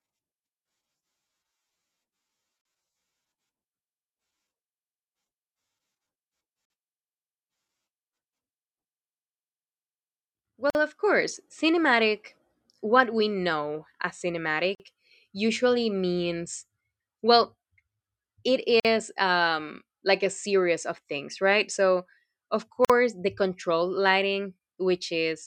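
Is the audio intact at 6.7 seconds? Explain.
No. At 6.65 to 6.70 s there is a gap at a join of encoded pieces. The speech was encoded in separate chunks, about 4 s apiece, and spliced without trimming, so the encoder's start-up delay and the padding on the previous chunk's last frame both remain. The result is a silence of about 49 ms cutting into continuous speech, its edges smeared by the codec, after which the speech resumes exactly where it stopped.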